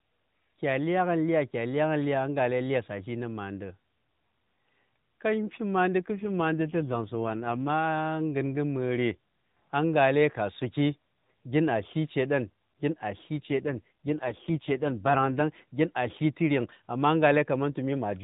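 AMR rate drops at 5.99 to 7.70 s and 13.39 to 15.42 s: the narrowband mobile speech briefly coarsens into a buzzier, more synthetic tone without gaps or band change, consistent with the codec falling from 12.2 to 5.9 kbps.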